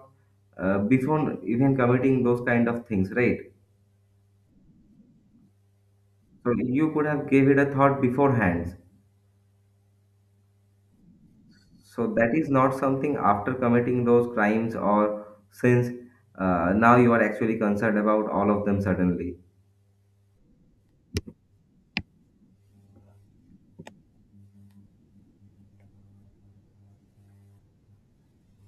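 Nothing stood out as a technical fault on listening to this speech recording.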